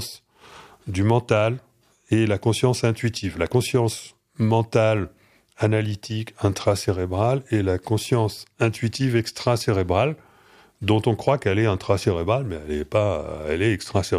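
Nothing stood out on listening; no technical fault could be heard at any point in the audio.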